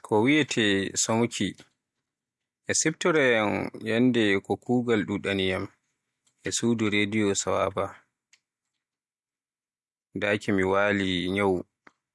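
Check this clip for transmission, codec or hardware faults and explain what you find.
Nothing audible in the speech points to a transmission, codec or hardware problem.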